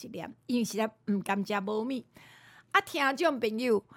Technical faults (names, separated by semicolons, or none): none